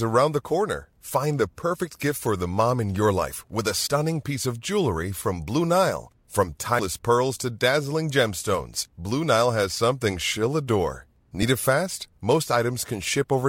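A jump at 3.86–3.88 s, just before "piece of jewelry from", drops about 50 ms of speech; another at 6.78 s loses roughly 100 ms. These are compressed frames skipped: whole frames went missing or were rejected, which fits about two and five frames respectively.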